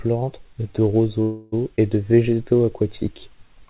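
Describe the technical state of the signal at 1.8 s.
A skip ahead occurs at 1.76 to 1.80 s, just before "et de". Roughly 70 ms of speech was discarded, most likely by the jitter buffer overflowing while later packets were already queued, so playback leaps forward instead of waiting. Only a brief 15 ms fill bridges the cut, and the two sides butt together almost directly, clipping part of a syllable. The sound is telephone-band, with nothing above 4 kHz, which fits a G.711 call codec.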